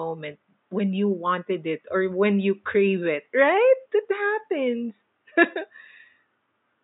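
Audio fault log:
Nothing stood out on listening to the speech, with only faint room noise sitting about 53 dB below it.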